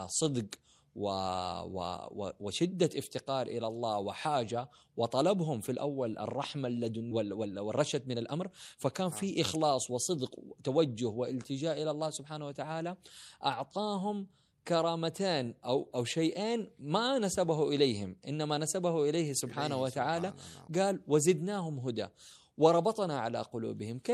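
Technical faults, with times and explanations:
7.11 s, skip ahead: about a second of speech was discarded while later audio waited in the buffer, so playback jumps straight across with no filler. The waveform shows two unrelated segments butted together, and the spectrogram shows an abrupt discontinuity in harmonics and formants.
7.23–10.94 s, jitter buffer speed-up: with excess audio queued, the receiver repeatedly cut pitch-period slices, shortening this stretch by roughly a third of a second. Speech runs about 108% speed at unchanged pitch and sounds hurried. Spectrogram harmonics stay level while syllables look compressed in time.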